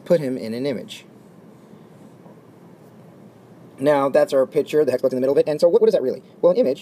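From 4.84 s to the end, a time-stretched section plays 1.87 times faster. Pitch holds. It sounds rushed, likely from dropped short pieces.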